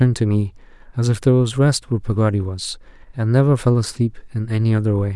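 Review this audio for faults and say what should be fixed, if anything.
No faults are audible, so nothing needs fixing.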